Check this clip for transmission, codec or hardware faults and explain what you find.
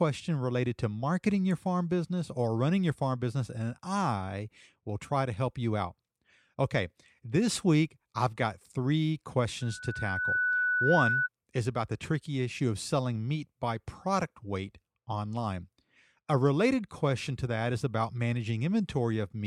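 One hardware fault is present: a loudspeaker feedback squeal. It runs from 9.61 s to 11.29 s, ending just before "is about the tricky". A microphone is picking up the loudspeaker it feeds. At 1.5 kHz the loop gain exceeds one, so that tone reinforces itself on each pass. It swells over well under a second into a steady squeal, sitting about 5 dB above the speech.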